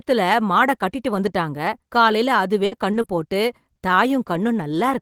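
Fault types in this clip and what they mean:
Scattered short gaps: After "மாட கட்டிட்டு வந்துட்டாங்க", between 1.65 and 4.64 s, about five small pieces of the speech stream go missing or arrive too late. The receiver fills each hole by stretching the sound just before it, covering roughly 150 ms in all, with the longest gap around 70 ms. Most of that stretch stays clear, but brief ticks, smears and small hiccups break through at each patched spot.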